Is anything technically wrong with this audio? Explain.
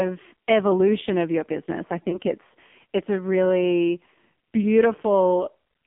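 Yes. There are two faults.

Throughout, the AMR narrowband mobile codec is heavily damaging the speech. At about 5.9 kbps, pulse-driven vocal-tract modelling makes it buzzy and synthetic. The spectrogram shows a hard ceiling near 3.5 kHz and nothing below about 150 Hz.

From 2.1 to 2.19 s, just after "of your business i" and before "it's it's a really", there are lost AMR speech frames. The decoder reuses its last good settings at falling gain, causing a brief warbling dip. This fits a single lost 20 ms frame. It shows as a short amplitude dip with smeared harmonics.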